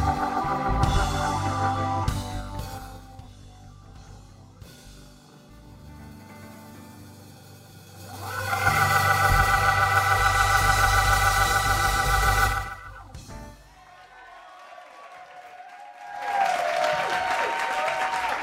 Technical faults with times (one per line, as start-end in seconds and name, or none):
7.80-8.73 zipper noise
15.98-16.44 zipper noise